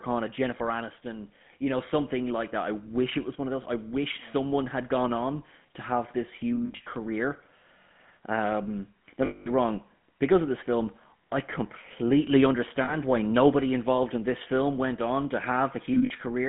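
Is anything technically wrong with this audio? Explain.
Yes. The speech has a buzzy, gravelly roughness throughout, and the band is narrow, running from about 150 Hz to 3.4 kHz. This is the GSM full-rate codec, and the sound fits its 13 kbps mode. It models the vocal tract and excites it with a regular pulse train built from a thinned-out excitation signal. That coarse excitation produces the rasp, and nothing survives above the telephone band, so the damage is plainly audible.

There are also four spots of lost GSM frames, where the sound briefly catches on a rough, metallic ring. They fall at 6.66–6.87 s, 9.26–9.49 s, 12.84–12.95 s and 15.94–16.11 s. At each gap the decoder reused the parameters of the last good frame, so the held sound rings instead of dropping out. The first and last spots are broken, about 120 ms and 100 ms lost in short runs. The 9.26 s spot is a solid 200 ms stretch, the longest, while 12.84 s is a brief 40 ms catch.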